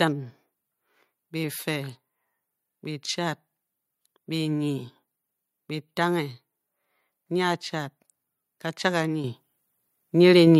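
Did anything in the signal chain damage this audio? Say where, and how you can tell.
Yes. At 9.24 s the microphone volume stepped up: call-processing gain control raised the device's input level by about 8 dB in one jump. Speech and background rise together, so the waveform envelope steps abruptly and the spectrogram brightens across all frequencies at once.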